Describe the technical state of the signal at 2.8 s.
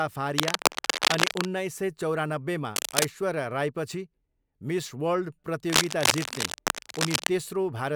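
At 2.8 s the speech sits under a burst of cable scratch noise, running from 2.73 to 3.06 s: dense, ragged scratching and rustling at about the same level as the voice. That's likely a worn cable or connector being moved, its contact resistance jumping around.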